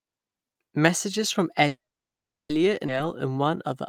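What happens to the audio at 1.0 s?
Nothing goes wrong at 1.0 s: the speech plays through that moment intact, with no dropout, click or distortion.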